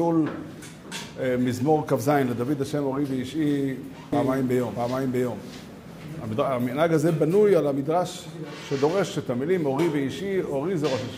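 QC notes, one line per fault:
4.13–6.05 s: doubled audio track. A second full-band copy trails the original by roughly 0.7 s at about equal loudness, starting and stopping abruptly, likely from a slower capture path. The waveform shows stacked repeats, and the spectrogram shows a time-shifted duplicate with no decay tail.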